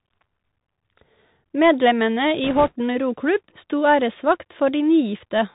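Bluetooth CVSD headset codec, throughout: the one-bit delta coding, consistent with 64 kbps, cuts everything above 4 kHz, leaving scratchy s sounds and granular hiss under the speech. Bit errors on a Bluetooth voice link, 2.44 to 2.76 s: at around two percent, flipped bits add a rushing crackle rather than loud clicks.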